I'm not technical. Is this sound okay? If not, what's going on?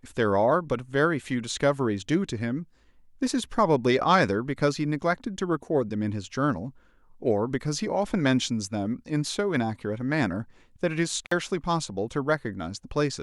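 No. At about 11.25 to 11.32 s the speech briefly drops out with a crackle on either side. That is an intermittent contact: a loose cable or plug lost its connection for roughly 54 milliseconds, cutting the signal before it reconnected.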